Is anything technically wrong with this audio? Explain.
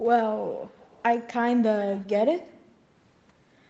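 Yes. An echo leak occurs from 0.78 to 1.03 s and again from 1.81 to 2.11 s. A faint copy of the speech returns 367 ms late, about 30 dB below it and then about 25 dB below. It likely comes from a loudspeaker whose echo canceller let residue through.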